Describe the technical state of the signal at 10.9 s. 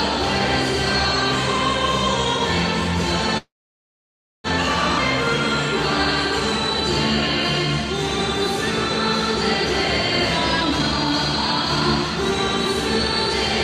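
The sound runs hurried at unchanged pitch, 120% speed, from 10.63 to 11.82 s: a jitter buffer speed-up cutting pitch-period slices to shed excess delay.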